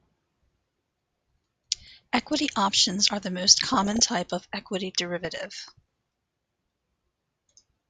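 Bit errors from weak reception are slipping past the error correction into the MP2 data, so corrupted samples put short noise blips into single sub-bands and corrupted scale factors make individual sub-bands leap in level for up to a frame. The result is DAB burbling over the speech from 1.83 to 2.53 s, 3.54 to 4.00 s, and 5.24 to 5.71 s. The last stretch is the densest, which fits an error rate of around one percent.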